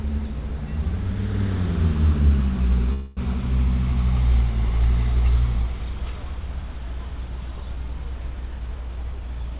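From 2.93 to 3.20 s the sound stops moving forward and its last moment is stretched into a fading buzz or hiss for about a quarter of a second. This is a call audio freeze, likely caused by delayed packets draining the jitter buffer, so a gap was inserted and nothing lost.

From 8.60 s to 9.59 s the sound runs at about 117% speed with its pitch unchanged, so it feels hurried. This is a jitter buffer speed-up. Having built up excess delay, the receiver repeatedly cut out pitch-period-sized slices, around a fifth of a second in total. Throughout, the call path's G.711 A-law coding leaves nothing above 4 kHz.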